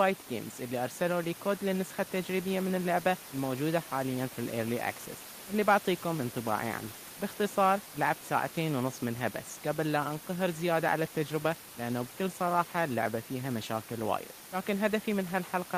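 No technical faults can be heard anywhere in this speech recording. Room noise sits in the background at about 15 dB below the speech, and it belongs to the recording space rather than to the system.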